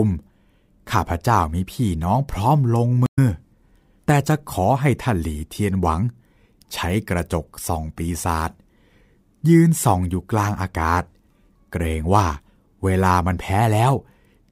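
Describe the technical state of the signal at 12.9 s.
At 12.9 s the signal is intact, with no audible dropout, clipping, distortion or other fault.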